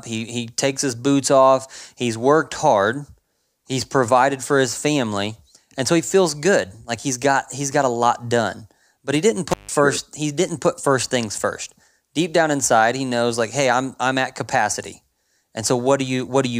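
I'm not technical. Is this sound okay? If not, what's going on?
No, there's one glitch: an intermittent contact at 9.50 to 9.72 s, right after "he didn't" and before "he didn't put first". A loose cable or plug briefly lost connection, so the speech drops out for about 0.15 s, with crackle at each edge and faint hiss in the gap.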